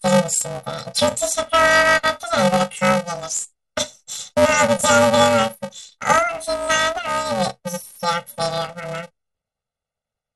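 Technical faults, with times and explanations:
Throughout: planar audio read as interleaved. Each 2.9 ms block stores all left samples then all right, but is read as alternating pairs, so each half replays at double speed. With blocks this short, the speech carries a robotic buzz near 345 Hz rather than an octave jump, which distinguishes it from a plain pitch-shift fault.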